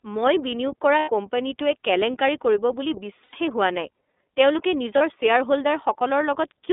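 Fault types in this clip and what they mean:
iLBC codec, throughout: The whole recording passes through a narrowband voice codec whose rate and coarseness fit iLBC's 13.33 kbps mode with 30 ms frames. Each frame's excitation is coded on its own, without borrowing from the previous one, so the speech stays intelligible but sounds plainly rough and slightly synthetic. The line is limited to roughly 250 Hz to 3.6 kHz, which removes the low body and the upper brightness.
lost iLBC frames, at 0.99 s, 3.24 s and 4.98 s: Packets were dropped, and the decoder filled each gap by repeating the last pitch cycle mixed with noise. The first two gaps last about 90 ms, which fits three lost 30 ms frames, and are heard as a held, faintly buzzy vowel. The third lasts about 30 ms, a single frame. Because frames decode independently, the speech recovers almost immediately after each gap.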